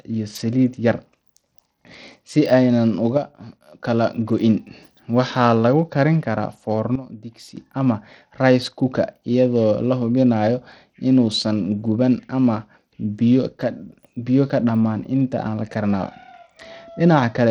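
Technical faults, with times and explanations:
Throughout: Bluetooth SBC compression. The top end of the speech thins out and flickers, with a gritty haze riding on everything. That's likely the SBC codec starved of bits, which fits a low rate around 80 kbps. The weaker high sub-bands get little or nothing, so treble comes and goes, and the rest is coarsely quantised, adding that grainy noise and some aliasing.
3.17–3.80 s and 6.95–7.57 s: sudden gain jump. In each window the level drops abruptly, by about 6 dB in the first and about 12 dB in the second, which sits between "lagu karin karaa" and "ama rice cooker". Speech and background noise fall together and then snap back, likely because a digital gain change was applied instantly rather than ramped, so there's no fade, just a step in loudness.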